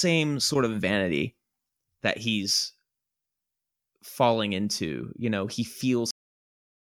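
A cut-off end hits this speech clip at 6.11 s, right after "know he", where the sound stops mid-utterance and drops straight to digital silence with no natural decay for the remaining 0.86 s or so. The final stretch of audio was never written out or played back, so the closing buffers are simply missing and the recording ends abruptly rather than fading or finishing the phrase.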